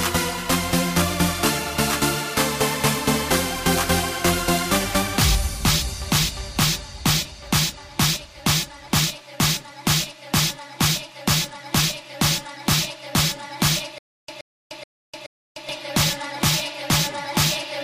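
From 13.98 to 15.69 s, a stutter with silent gaps: an identical 126 ms burst repeats four times, each followed by 301 ms of silence. That repetition of the same fragment, rather than missing audio, sets it apart from plain dropouts. The likely cause is a stalled stream replaying its last fragment.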